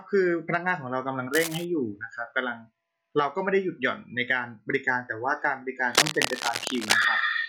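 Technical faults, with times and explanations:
1.34–1.65 s and 5.92–7.05 s, cable scratch noise: dense, uneven bursts of scratching and rustling ride over the speech, first about 10 dB below it, then roughly as loud for over a second. Likely a worn cable or connector being moved, its contact resistance changing rapidly.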